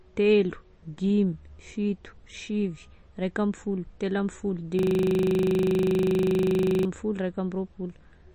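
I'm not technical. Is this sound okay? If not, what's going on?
No. Throughout the recording the speech sounds muffled and plainly watery, with a swirling, metallic edge on hissy sounds like s. Nothing above about 8.3 kHz gets through, so the crisp top end is gone. This is likely MP3 compression squeezed hard. To save space, the encoder throws away the highest frequencies and drops quieter details, and those details flicker in and out, which causes the bubbly, chirpy quality.

From 4.79 to 6.85 s the speech stops and turns into a steady mechanical buzz. That is a system hang loop. The computer froze, but the sound hardware kept replaying the last 40 ms of audio it had, over and over, 51 times. Repeating such a short piece 25 times a second blurs into a buzzing tone rather than a recognisable stutter.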